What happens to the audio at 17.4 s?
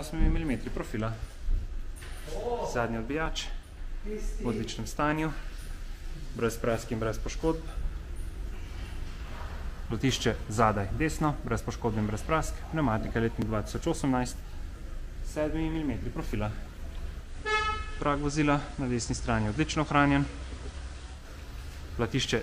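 Digital radio blending to analogue: from 17.20 to 21.28 s the receiver cross-fades over 171 ms to FM, so hiss rises and the level drops about 1 dB, with no silent gap as in a dropout.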